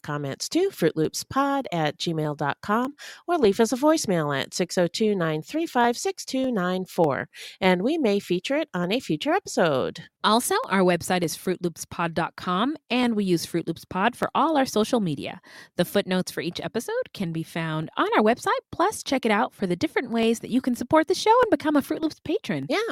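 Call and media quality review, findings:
Regular click every 0.6 s across speech, 0.45–22.63 s, about 40 in all. Likely clock drift buffer slips between capture and playback devices, several hundred ppm apart, each dropping or repeating a small block. Strictly periodic, unlike random packet-loss glitches.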